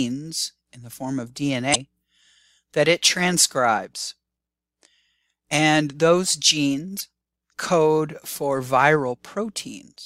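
Damaged data in a compressed stream at 1.71–1.76 s and 6.96–7.01 s: corrupted bytes make the decoder misread frames and resync, giving two brief glitches in this audio.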